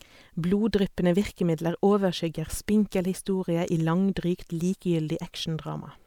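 Nothing technical stands out in this short bit of speech; there's no fault to point to anywhere along it.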